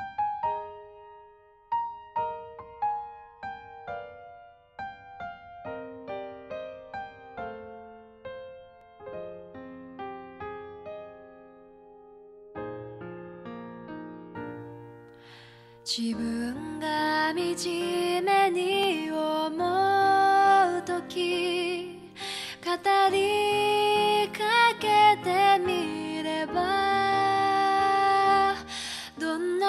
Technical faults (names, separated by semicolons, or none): overlapping chunks